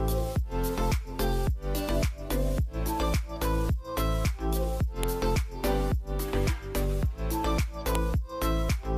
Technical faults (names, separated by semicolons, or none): file header played as audio